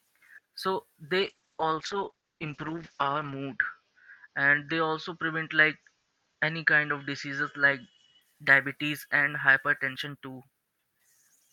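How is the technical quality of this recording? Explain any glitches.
The recording is compromised by one sustained glitch. From 1.21 to 8.27 s, before "diabetes and hypertension too", a call bitrate drop from 48 to 9 kbps made the encoder code coarsely and cut the bandwidth from 20 kHz to 8 kHz. For about 2.2 s at its lowest, the speech sounds muffled and watery. On a spectrogram, energy above 8 kHz vanishes.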